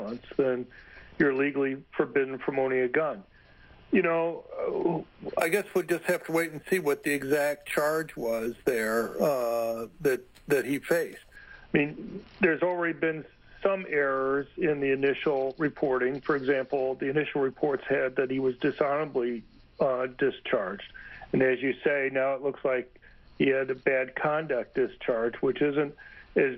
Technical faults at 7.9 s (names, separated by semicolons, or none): imaging from sample-and-hold upsampling